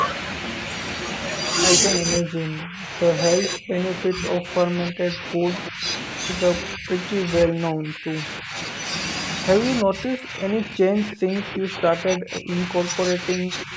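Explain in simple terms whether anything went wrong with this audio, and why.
Two things went wrong. The call's echo canceller most likely mistook people talking over each other for echo of its own loudspeaker, and turned the talker down. This is speech suppressed in double talk: the voice dips sharply or drops out in pieces at 2.0–2.9 s, 3.4–5.9 s, 6.75–6.89 s, 7.27–8.55 s, and from 9.83 s to the end.

Separately, at 5.66–5.70 s there is an echo leak. A loudspeaker's sound likely slipped past the echo canceller and was sent back, so a faint, brief copy of the voice arrives about a third of a second late.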